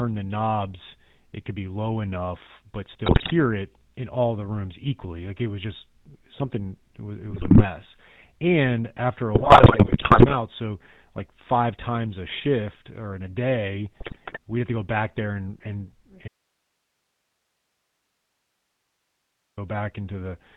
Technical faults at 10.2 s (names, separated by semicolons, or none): GSM full-rate codec; GSM bit errors